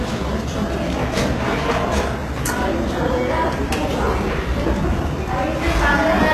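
A recording of sounds, likely passed through HE-AAC compression throughout, at a rate pointing to about 16 kbps. Only the lower spectrum is properly coded; the treble is rebuilt by copying lower bands upward, so highs sound gritty and metallic, with nothing above 12.3 kHz.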